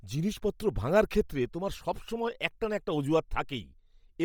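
Speech carries heavy damage from what is likely Bluetooth LC3 compression throughout. The upper spectrum turns breathy and grainy rather than dull, because noise fills it in, and content still reaches about 20.2 kHz. This points to roughly 32 kbps with 10 ms frames.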